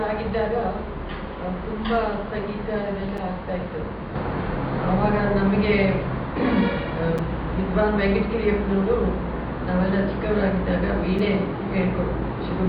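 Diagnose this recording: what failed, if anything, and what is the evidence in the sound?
The failure is a gap between chunks, at the stage where the audio was stored or sent as blocks and joined again. Three short holes break the sound, at 3.17 s, 7.18 s and 11.19 s. Each lasts about 6.5 ms. They recur every 4.0 s, which points to 4-second chunks. Nothing is lost. Silence is inserted at each join, either by codec padding or by a player starting each chunk late.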